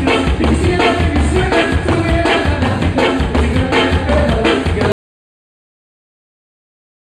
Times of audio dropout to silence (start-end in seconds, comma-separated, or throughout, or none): 4.92-7.20